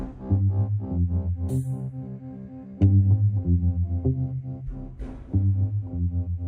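No technical faults can be heard anywhere in this music recording; the signal holds steady and intact from its opening moment to its close.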